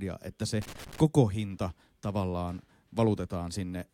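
Loose connector crackle runs from 0.62 to 1.00 s, just after "että se" and before "hinta tavallaan". A worn or dirty contact in the signal path was making and breaking rapidly. It chopped the speech into an irregular burst of scratchy crackle lasting about 0.4 s.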